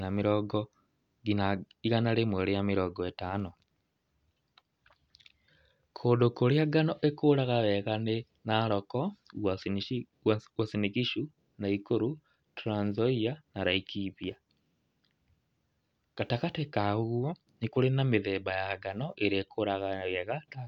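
A speech recording with nothing technically wrong with it.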